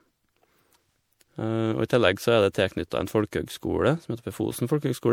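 Throughout the speech, the sound is swirly and hollow, with smeared consonant attacks and more watery noise than a single encode would leave. That points to generation loss, likely from about five successive MP3 passes at a rate that fits 96 kbit/s, each requantising on a shifted frame grid.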